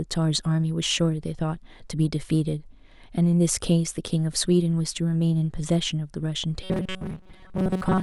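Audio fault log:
6.64–8.03 s, robotic sound from repeated short buffers: speech becomes a rigid metallic 188 Hz buzz, likely a roughly 5 ms chunk looping in place of most of the real audio.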